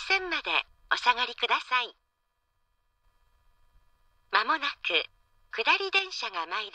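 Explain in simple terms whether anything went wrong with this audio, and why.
The sound suddenly turns quieter from 1.62 to 3.04 s and again from 5.99 s to the end, most likely because one channel drops out.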